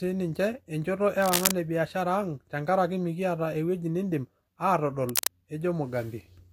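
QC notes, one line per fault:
1.22–1.51 s (between "e njoto" and "e biashara") and 5.09–5.27 s, cable scratch noise: brief, dense, uneven scratchy rustling about as loud as the speech, likely from a worn cable or connector being moved, its contact resistance jumping rapidly and injecting noise bursts.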